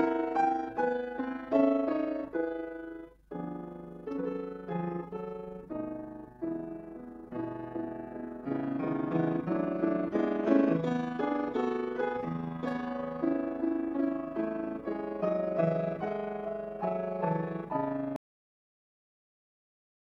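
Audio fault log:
18.16–20.13 s, cut-off end: The sound stops abruptly mid-event at 18.16 s. The final buffers were never played, so it drops straight to digital silence without any decay.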